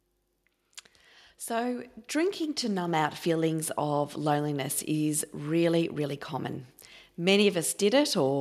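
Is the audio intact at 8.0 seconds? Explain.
Yes, the speech at 8.0 seconds is intact, with no fault present at that moment.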